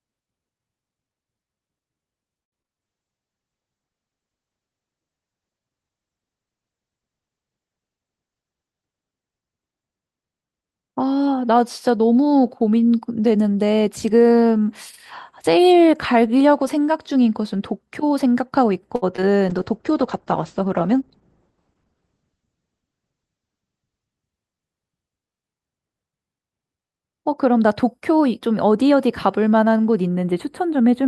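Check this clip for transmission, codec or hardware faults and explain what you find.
The speech has four kinds of fault, several of them repeating.

Repeated packet loss (robotic sound) makes the speech choppy from 2.43 to 2.69 s and again from 18.96 to 19.38 s. Each span has three gaps. Missing audio was patched by extending the preceding sound, leaving 40 ms unrecovered. The first burst is 46% concealed, with a longest gap of 88 ms. The second is 30% concealed, with a longest gap of 66 ms.

A call bitrate drop makes the speech sound muffled and watery from 2.84 to 12.50 s and from 19.50 to 25.69 s. The top end disappears above 8 kHz. This fits the encoder falling from about 64 kbps to 10 kbps and coding more coarsely. It stays at the lowest rate for 5.41 s and 4.19 s respectively.

A jitter buffer speed-up makes the delivery sound hurried but unchanged in pitch from 7.97 to 8.73 s, at 109% speed, and from 21.01 to 22.09 s, at 105%. 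Each time the receiver trimmed an excess backlog by cutting short pitch-period slices, around 70 ms in total per stretch.

Channel delay (comb filtering) gives the sound a hollow, phasey edge from 30.08 s to the end. A notch near 5 kHz points to one channel lagging by a few samples, about 0.1 ms. Summing the channels to mono then cancels the shared content at evenly spaced frequencies.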